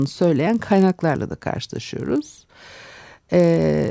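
Throughout the speech, a resampler restarted on every block leaves a 50 Hz buzz under the signal. Each 20 ms block was converted in isolation, likely from 44.1 kHz down to 16 kHz, so every block edge carries a small discontinuity that recurs at the block rate whenever sound is present.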